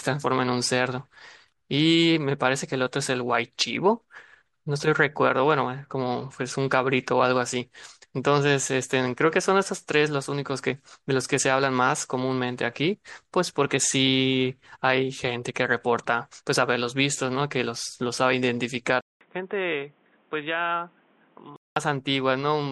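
At 19.01 s the input likely switched to a poorer device. After 200 ms of silence, the speech turns boxy, with nothing above 3.8 kHz, until 21.76 s.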